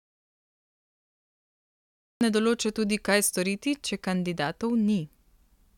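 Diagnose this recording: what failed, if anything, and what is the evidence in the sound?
Complete silence with no room tone runs until 2.21 s, then speech enters mid-flow at "ne določa tudi". This is an audio dropout to silence, likely from input lost before the recorder, which kept writing silence.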